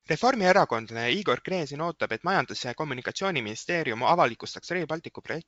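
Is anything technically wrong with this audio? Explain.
No, nothing technically wrong stood out on listening to this speech clip.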